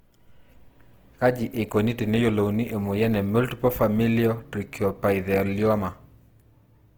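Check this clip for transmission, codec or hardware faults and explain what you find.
One fault runs through the whole of the speech: plainly audible Opus compression.

From start to finish, the codec, likely Opus in its music (CELT) mode at a rate consistent with about 16 kbps, keeps each band's energy but refills starved bands with folded or noise-like content. The sound turns grainy and rough. A spectrogram shows smeared, noisy texture up to about 20.2 kHz, with few holes.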